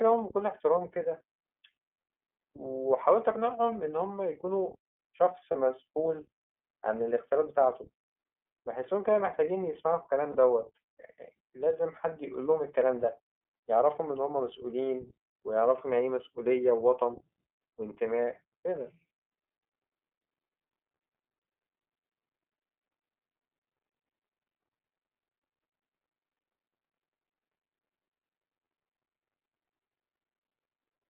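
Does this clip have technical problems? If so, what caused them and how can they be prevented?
Yes. The whole speech clip sounds thin and boxed-in, with a slightly rough, synthetic edge on every syllable. That comes from the iLBC codec, a narrowband VoIP coder. The line passes only about 250 Hz to 3.4 kHz, so the upper range of the speech is gone, and the coarse coding of each frame's excitation is plainly audible. The 30 ms frame length fits iLBC's 13.33 kbps mode. To prevent this, carry the call on a wideband codec such as Opus or G.722 instead.

At 5.51 s and again at 10.32 s there is a brief held, faintly buzzy sound lasting about 30 ms, and then the speech snaps straight back to normal. These are lost iLBC frames. Each event points to a single dropped packet. The decoder filled the hole by repeating the last pitch period blended with noise. Because every iLBC frame is decoded independently, the next frame that arrives is immediately clean again. 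To prevent this, reduce packet loss on the network path, or add forward error correction or redundant frames to the stream.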